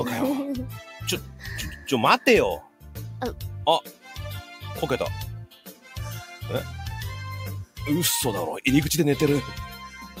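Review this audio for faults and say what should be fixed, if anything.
A noise suppressor applied to music or sounds runs through the whole clip. It treats steady, sustained content as noise and keeps varying its gain reduction, so the level pumps by around 5 dB while held portions and decays thin out against the attacks.

Sound cut by the noise suppressor occurs at 2.61–2.85 s, 3.85–4.06 s and 5.46–5.87 s. In each span the suppressor clamps down hard, with drops of about 12, 11 and 11 dB, so sustained material sinks in level.

To prevent both, bypass the speech-tuned noise suppression for non-speech material, or switch it to a music-aware mode.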